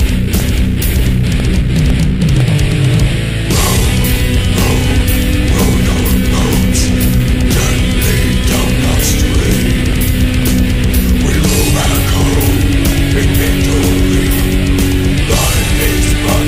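Periodic USB or driver dropouts tick every 0.5 s from 0.40 to 16.43 s, each a brief silent gap of about a millisecond; their strict regularity separates them from random clicks.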